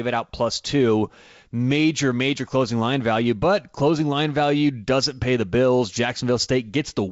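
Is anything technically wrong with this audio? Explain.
No, nothing's technically wrong here: it's speech carried over G.722 wideband telephone coding at 64 kbit/s, so it reaches up to about 7 kHz the way that codec does, and there's nothing beyond that to point to.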